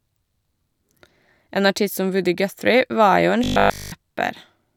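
From 3.44 to 3.92 s the speech collapses into robotic sound from repeated short buffers: a rigid, metallic buzz locked at 50 Hz that only loosely tracks the words. The likely cause is audio arriving too slowly, so the playback side keeps looping the last chunk, which at 50 Hz fits a 20 ms buffer. During that half second essentially nothing new gets through; it's all repeats standing in for the skipped audio.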